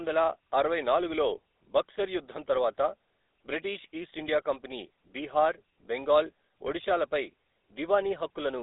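Speech passed through the GSM full-rate codec for its whole length, giving a buzzy, gravelly roughness, which fits 13 kbps pulse-excited coding. A spectrogram shows a hard ceiling with nothing above 3.8 kHz and a thin band from 300 Hz to 3.7 kHz.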